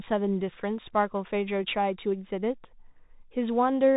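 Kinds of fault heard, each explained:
Bluetooth CVSD headset codec: the one-bit delta coding, consistent with a 64 kbps link, cuts everything above 3.8 kHz, leaving scratchy sibilants and granular hiss beneath the speech throughout.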